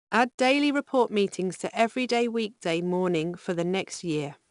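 Throughout, 4-bit ADPCM compression quantises each sample step coarsely, adding plainly audible gritty hiss to the speech and cutting everything above 10.6 kHz, consistent with about 89 kbps.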